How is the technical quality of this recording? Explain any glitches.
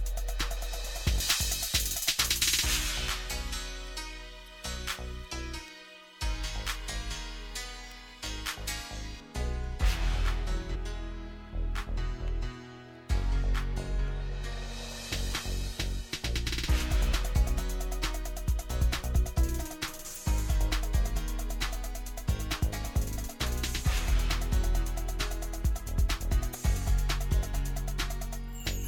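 Technical quality is compromised by a treble imbalance early on and four brief decoding glitches.

From 1.20 to 9.20 s, pre-emphasis left on: the J.17 treble boost was never undone, lifting 10 kHz about 11 dB over 1 kHz, so the audio sounds thin, bright and sibilant.

At 4.46, 10.74 and 20.14 s, and from 26.51 to 26.55 s, damaged data in a compressed stream makes the decoder lose frame sync, producing short chirps or blips.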